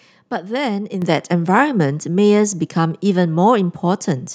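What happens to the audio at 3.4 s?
At 3.4 s the speech carries on cleanly, with no dropout, click, distortion or other fault at that point.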